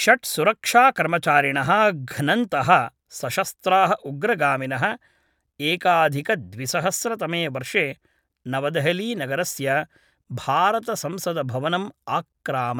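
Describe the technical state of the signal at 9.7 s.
At 9.7 s the speech signal is intact, with no audible fault at that moment.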